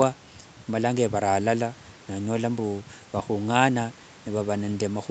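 No technical faults can be heard in this speech.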